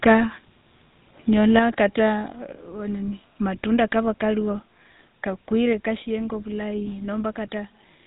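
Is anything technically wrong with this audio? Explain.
Yes. Throughout the speech, GSM full-rate codec damage is plainly audible. The codec models the vocal tract and drives it with sparse, regularly spaced pulses, which fits its 13 kbps rate. That gives a buzzy, gravelly roughness. Nothing remains above 3.8 kHz, so the top sounds dull.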